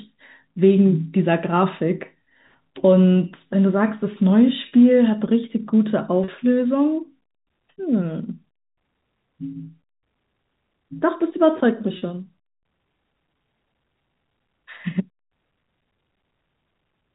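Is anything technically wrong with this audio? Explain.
Yes. Packet loss with pitch repetition occurs four times, at 4.68, 6.24, 11.98 and 14.82 s. Audio went missing in transit, about 40 ms each in the first three cases, consistent with two 20 ms packets, and about 20 ms at 14.82 s. The receiver filled each hole by looping the last pitch cycle, so the sound briefly freezes into a buzzy held tone before the real signal resumes. The G.711 telephone-band coding carrying the call is audible as the usual narrowband sound.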